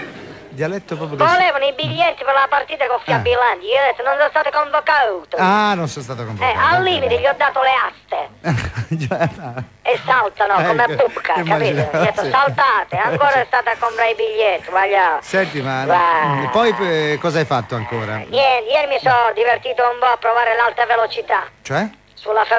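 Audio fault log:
Nothing amiss here: the audio comes across a call link just as you'd expect, with nothing above 8 kHz, which fits a G.722 codec running at 64 kbps.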